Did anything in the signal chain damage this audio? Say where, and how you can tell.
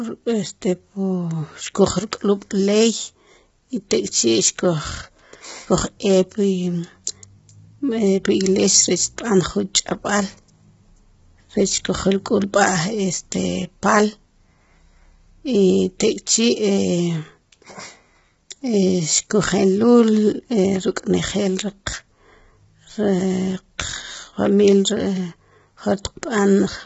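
Yes. The damage sits at the codec stage and runs through the whole speech clip. Voices sound rough and grainy. Noise fills the gaps between pitch harmonics. Nothing survives above 7.7 kHz, so the top band is cut off. This points to a low bitrate, around 16 kbps, and heavy low-delay AAC compression, likely AAC-ELD. Its short frames cannot resolve harmonics finely. Too few bits remain, so the spectrum between them fills with noise.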